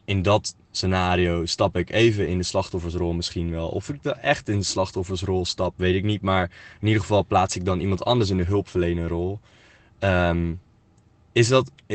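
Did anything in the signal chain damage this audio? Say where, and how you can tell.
No, nothing in the signal chain damaged this audio.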